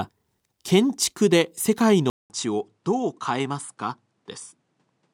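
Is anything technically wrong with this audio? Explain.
Yes. From 2.1 s to the end, after a 200 ms gap, the sound loses everything above 10.5 kHz, drops a few dB and gains a faint new noise floor. The likely cause is the input switching to a poorer device. A plain filter would not add the gap, the level drop and the new noise.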